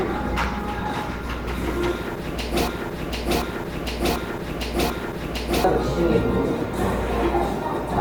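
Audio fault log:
throughout: Opus compression. The sound is grainy and rough, with tonal parts smeared into noise rather than swirling, and the damage is plainly audible. This is likely the codec's music mode running short of bits and refilling bands with folded copies of lower bands or with noise, which fits a low bitrate around 16 kbps. On a spectrogram, the bands stay filled right up to about 20 kHz, but harmonics look blurred and speckled, with few empty holes.
2.68–5.64 s: broken-record loop. A fragment about 0.74 s long plays four times back to back, so the same stretch of sound stutters at a steady pace of roughly 1.35 repeats per second. Whatever should have followed in those three seconds never arrives. This is likely a stalled player or stream resending the last chunk it held. The waveform shows identical blocks tiled end to end, and the spectrogram shows a pattern stamped out at regular intervals.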